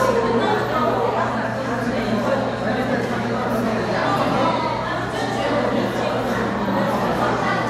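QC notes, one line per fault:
Nothing stood out on listening.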